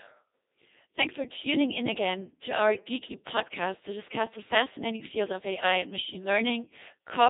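Speech runs through a Codec 2 vocoder for the whole clip. The decoder rebuilds the sound from sine waves driven by pitch, voicing, energy and a spectral envelope, so the original waveform is gone and the result is robotic and buzzy, with heavy damage that fits a 2.4 kbit/s mode. The band is confined to about 300 Hz to 3.7 kHz, with nothing at all above 3.7 kHz.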